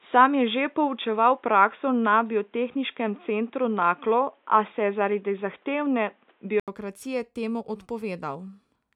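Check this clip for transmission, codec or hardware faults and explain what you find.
There's one fault. From the start to 6.68 s the speech is dull and boxy, with nothing above 3.8 kHz and faint background noise well below it. The input was likely switched to a poorer device, and after an 80 ms gap the fuller sound returns, about 5 dB different in level.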